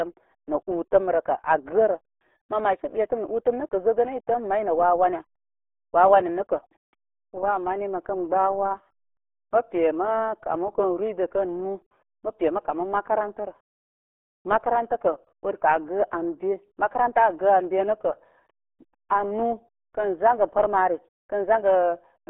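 It's a speech clip, and the whole thing has been through what sounds like the RealAudio 14.4 codec. It's band-limited to roughly 300 Hz to 3.5 kHz with nothing above 3.8 kHz, and heavy codec damage leaves it muffled and gargly, which fits a starved 8 kbit/s dial-up-era stream.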